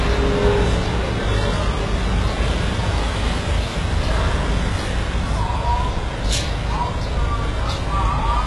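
The encoding was likely HE-AAC compression at a very low bitrate, consistent with about 12 kbps. Throughout this sound recording, the top end is rebuilt by copying lower bands upward and stops at 11.5 kHz, so the treble is heavily damaged: gritty, metallic and misaligned with the lower harmonics.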